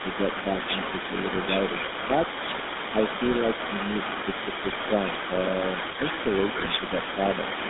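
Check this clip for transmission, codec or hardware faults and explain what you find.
Four faults are audible: GSM codec colouring throughout, a delayed echo for the whole clip, four brief dips in the talker's level, and two bursts of corrupted decoding.

GSM full-rate codec: Across the whole clip the speech sits in a telephone band of roughly 200 Hz to 3.7 kHz with a plainly audible buzzy, gravelly roughness. The first GSM codec rebuilds the voice from a vocal-tract filter driven by a sparse, regularly spaced pulse excitation, and that coarse excitation is what makes it buzz. A simple band-limited line would sound dull but smooth, not gritty.

Echo leak: From start to end a second copy of the speech trails the original by about 0.32 s, roughly 15 dB quieter. The likely cause is a loudspeaker-side echo canceller that fails to remove all of what its microphone hears, so part of it returns to the caller. 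Room reverberation would smear the sound continuously, whereas this is a discrete delayed repeat.

Speech suppressed in double talk: The level dips by roughly 5 dB at 2.07–2.19 s, 2.92–2.98 s, 4.06–4.13 s and 5.81–5.86 s, each lasting about a tenth of a second or less. The likely cause is an echo canceller that cannot tell the talker from the loudspeaker echo while both sides talk, so it turns everything down. The audio sags briefly and then comes back. In a dropout the sound would vanish outright.

GSM bit errors: At 4.63–4.74 s and 6.58–6.81 s the speech breaks into squawks, pops and gargling. Flipped bits on a weak radio link corrupt the decoder's filter, pitch and gain values, so a run of frames comes out with a warped spectrum or a jumping level. Unlike a level dip, these frames are actively mangled, not merely quieter.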